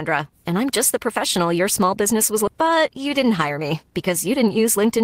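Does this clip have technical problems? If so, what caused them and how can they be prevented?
Yes. Right after "your small business was", at 2.47 to 2.49 s, there's a skip ahead: roughly 0.7 s of speech was dropped, probably by an overflowing jitter buffer, and the two sides are butted together with no fill. Keeping the jitter buffer deep enough and network delivery steady would prevent it.

From 2.61 s to the end there's a jitter buffer speed-up. The receiver trims short pitch-period chunks, about 150 ms in all, so the speech runs about 6% fast at unchanged pitch. Smoother packet arrival, so late packets don't land in bursts, would prevent it.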